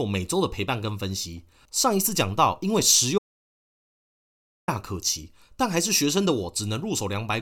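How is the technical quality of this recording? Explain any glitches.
The recording has one clear glitch. An audio dropout to silence runs from 3.18 to 4.68 s, cutting the speech off mid-flow for about 1.5 s. The input signal was likely lost while recording continued, so the gap holds silence with no room tone, and the speech in that stretch is gone.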